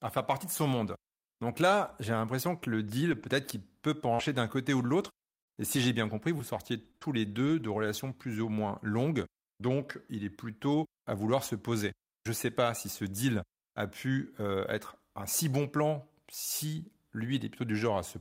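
Lost packet rebuilt from error correction, 2.59 to 2.61 s, in a speech clip: a 20 ms frame was played from the low-bitrate copy carried in the following packet, so it sounds briefly rougher and noisier instead of dropping out. Scattered short gaps, 4.15 to 8.46 s: about seven separate losses, the longest around 40 ms, were patched by continuing the preceding sound, leaving brief ticks and smears.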